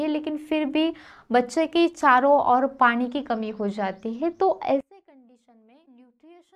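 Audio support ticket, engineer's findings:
Level collapse from 4.81 s to end of clip (6.55 s), about 30 dB down, faint residue only. Centre-panned content gone. Likely one channel inverted: reversed polarity on one side, so in-phase material cancels when the pair is summed to mono and only the L/R difference remains.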